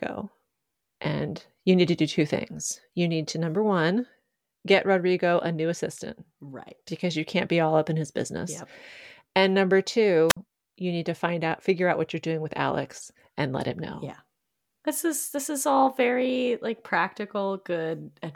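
A speech clip with a wireless microphone squelch dropout from 10.29 to 10.37 s: fading FM signal brings a hiss rise, then about 54 ms of near silence before "you need to find", a blank vertical gap on the spectrogram and a flat waveform.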